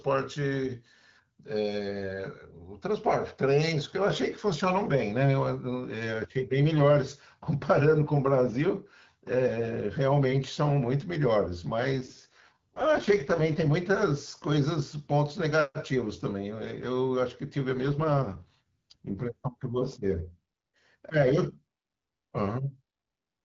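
AMR rate drop at 11.78 to 13.71 s and again at 17.73 to 19.24 s: the speech turns rough and raspy while keeping the same HD Voice bandwidth, with no gap. Each time, the wideband codec seems to be pushed to a lower mode, consistent with a step from 12.65 down to 6.6 kbit/s so more bits can go to error protection. Clarity returns once the rate climbs back.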